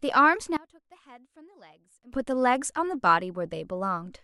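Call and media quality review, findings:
Speech level collapses by about 25 dB from 0.57 s to 2.13 s, leaving a faint residue of the centred voice. Sound returns to full level afterwards.

Likely cause: one channel inverted, with polarity reversed on one stereo leg upstream of a mono downmix. Content common to both channels cancels on summing; only the small inter-channel difference survives. Check channel wiring and polarity handling in the mixing or capture stage for that interval.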